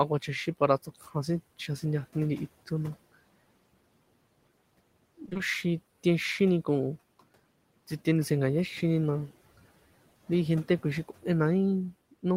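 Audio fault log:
0.83–1.15 s, speech cut by the noise suppressor: the suppressor mistook parts of the speech for background, pulling them down by about 10 dB over roughly a tenth of a second. They sound faint or swallowed and sink toward the room noise, which sits about 22 dB below the speech, with no choppy or metallic texture.
5.25–5.41 s, repeated packet loss (robotic sound): this sounds like four quick dropouts of up to 20 ms each. Each hole is patched by stretching the preceding sound, so about half this 160 ms stretch is filled-in audio. The result has a choppy, robotic stutter rather than a smooth drop in level.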